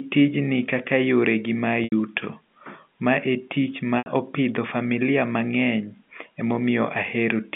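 Packet loss with pitch repetition hits this telephone speech twice, at 1.84 to 1.92 s just after "kaka yore gi mag" and again at 3.98 to 4.06 s. Each 80 ms gap, which fits four lost 20 ms packets, was bridged by looping the last pitch period, so the sound briefly holds with a buzzy quality.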